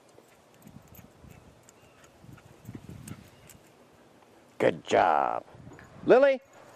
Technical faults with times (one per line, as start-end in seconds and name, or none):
none